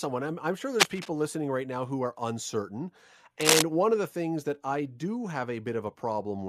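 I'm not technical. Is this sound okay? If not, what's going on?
No. There's cable scratch noise twice: a rough, uneven scratching at 0.74–1.11 s, right after "I'm I'm sure", and again, slightly louder than the speech, at 3.41–3.62 s after "now who are uncertain". It's likely a worn cable or connector being moved. Unlike a single click or a steady hiss, it's a short, ragged, rustling burst.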